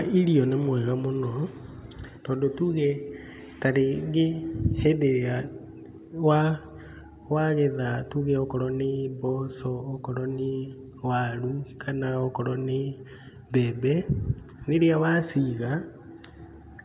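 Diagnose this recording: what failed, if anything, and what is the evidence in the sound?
Nothing stood out on listening to this speech recording that would point to a failure at any stage of the chain.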